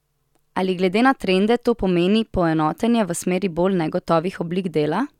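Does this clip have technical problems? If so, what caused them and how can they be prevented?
No, nothing stood out as a technical problem on listening to this speech clip, so there is nothing here that needs preventing.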